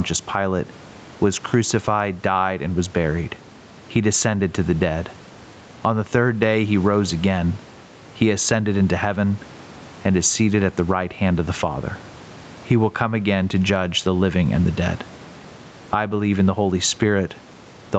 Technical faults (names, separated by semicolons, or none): gain pumping